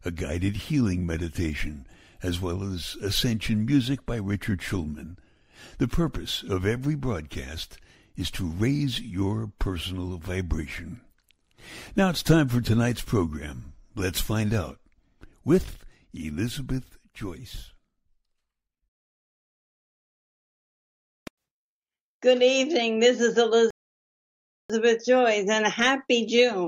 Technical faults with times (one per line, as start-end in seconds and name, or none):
23.70-24.70 playback stall